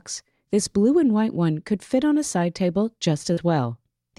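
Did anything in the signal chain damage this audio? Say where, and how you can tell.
Yes. At the network stage there is short concealed packet loss from 3.33 to 3.39 s: about 40 ms arrived too late for the decoder, which extrapolated the preceding sound for roughly 35 ms and then cross-faded back, leaving a brief smear or wobble.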